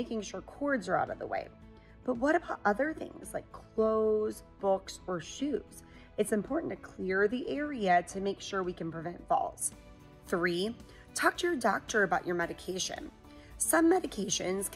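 From the start to 9.62 s, de-emphasis has been applied wrongly. A treble-cut filter meant to reverse pre-emphasis acted on audio that did not need it, so the response falls away smoothly above the midrange, reaching about 14 dB down at 10 kHz relative to 1 kHz. The sound is dull and muffled. On a spectrogram the upper bands look faint and steadily darker toward the top. The waveform shows softer, rounded transients.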